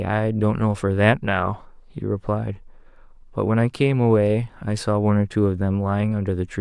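Nothing in this recording stands out as a technical fault, so there's really nothing to flag here.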